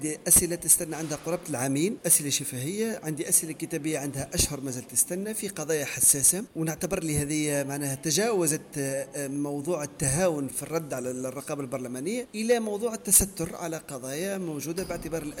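Four sharp single clicks land at 5.79, 6.84, 9.36 and 14.80 s, each one most likely dropped samples: a tiny fraction of a millisecond goes missing, the waveform jumps ahead, and you hear a crisp tick rather than any gap in the sound.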